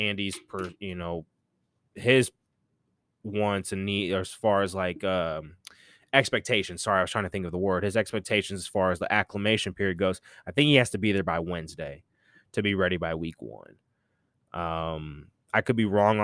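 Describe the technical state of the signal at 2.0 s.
At 2.0 s the signal is intact, with no audible dropout, clipping, distortion or other technical fault at that moment.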